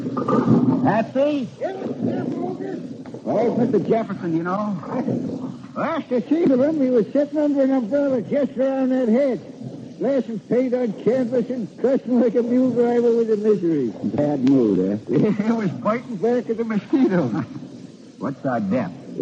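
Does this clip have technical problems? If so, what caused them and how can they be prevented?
No technical faults are audible.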